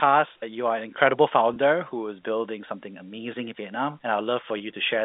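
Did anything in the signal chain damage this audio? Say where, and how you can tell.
Yes, at the network stage: packet loss with pitch repetition, from 1.54 to 1.56 s and 4.58 to 4.60 s. Each 20 ms gap, likely a single lost packet on the G.711 call, is filled by repeating the last pitch period, so it sounds briefly held and buzzy. A waveform shows identical repeated cycles, and a spectrogram shows frozen, flat harmonics.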